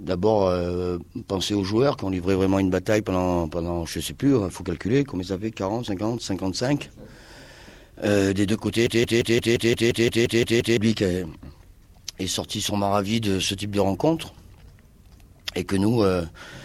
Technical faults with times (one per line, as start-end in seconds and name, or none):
8.87-10.77 broken-record loop